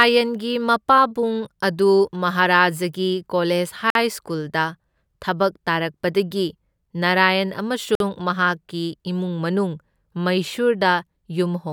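Each 4-second chunk meets the next with a gap between chunks, so hard-edged 50 ms holes cut into the speech at 3.90 s and 7.95 s.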